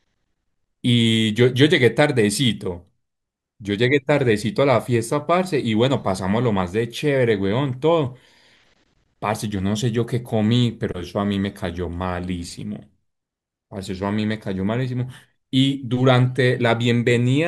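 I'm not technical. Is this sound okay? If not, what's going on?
Yes, nothing in this recording points to a technical problem with the signal.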